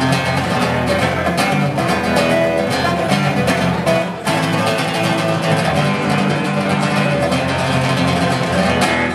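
From the start to 5.31 s, crude rate conversion adds a gritty, inharmonic fizz that follows loud and high content, roughly 25 dB below the sound. Samples were dropped without filtering, pointing to a 48 kHz to 44.1 kHz change. Unlike steady hiss, the fizz vanishes in quiet passages.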